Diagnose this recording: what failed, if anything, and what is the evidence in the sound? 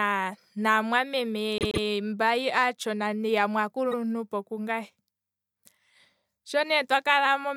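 Repeated frames, at the codec or storage stage. At 1.58 s the speech stutters. A 131 ms block plays three times in a row, running to 1.84 s and adding 261 ms. At 3.91 s a shorter 52 ms block plays twice, adding another 52 ms by 3.96 s. The first block fits a run of about five compressed frames, the second about two. The decoder was handed those frames again and played them again, so the recording grew longer.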